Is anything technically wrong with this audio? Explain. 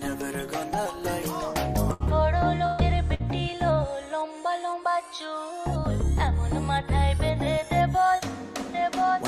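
Yes. Three bursts of packet loss occur, at 1.93 to 2.03 s, 2.66 to 2.81 s and 3.14 to 3.22 s. Audio arrived too late or not at all, so the receiver stretched and faded the last sound for 66, 122 and 52 ms, then jumped ahead, skipping 60, 120 and 60 ms.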